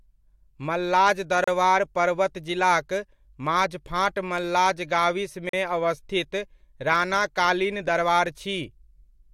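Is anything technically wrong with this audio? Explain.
Yes. A gap between stream segments appears at 1.44 s (34 ms) and 5.49 s (41 ms). The segments' time stamps leave a hole that the player fills with hard-edged silence, about four seconds apart. Unlike a dropout, no speech is lost. It resumes exactly where it paused.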